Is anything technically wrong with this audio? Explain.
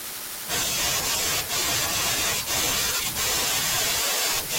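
Yes, there's damaged data in the compressed stream at 1.12–1.16 s and 2.97–3.01 s: corrupted bytes throw the decoder out of sync, giving brief blips.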